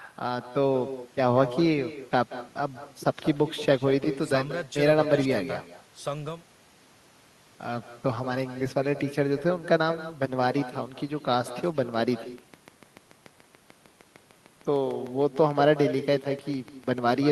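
Throughout the speech there is echo with no canceller: the far end's loudspeaker output is picked up by its microphone and returned uncorrected. Each phrase is followed, roughly a fifth of a second later, by a thinner copy sitting about 13 dB below the direct speech.

From 11.33 s to the end, a train of clicks runs at a regular 6.7 per second, reaching roughly the level of the speech itself. The clicks sound like a steady ticking over both speech and pauses, likely from electrical interference or a faulty connection or power supply.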